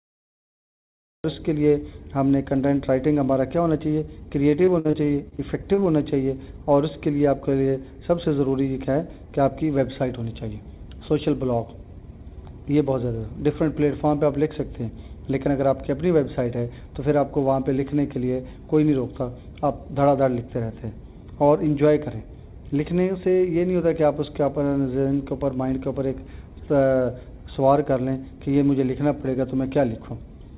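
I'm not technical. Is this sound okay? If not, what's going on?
No, there are two problems.

The first is a cut-off start. For the first 1.24 s there's dead digital silence, and then the sound suddenly begins partway through, with no natural start or fade-in. It's as if the recording started a moment too late and caught things already in motion, so the opening feels abrupt and chopped rather than beginning cleanly.

The second is repeated packet loss, which gives it that robotic sound. Between 4.65 and 5.84 s the audio keeps dropping out in small bits, about nine times in just over a second, and the longest gap is about 50 ms. Each time, the system covers the hole by stretching out the last bit of sound it had, and about a fifth of that stretch is patched this way. That's why it turns choppy and mechanical there, with pieces missing.

The audio also came through a phone-style call connection, which is why nothing above 4 kHz comes through and it sounds a little narrow, like a phone line.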